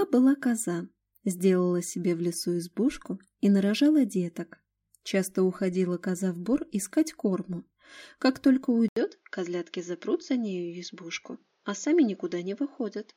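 At 8.88 s there's an 80 ms gap, then the sound goes dull, capped around 7 kHz, a bit quieter, with a faint new hiss, likely an input switched to a poorer device.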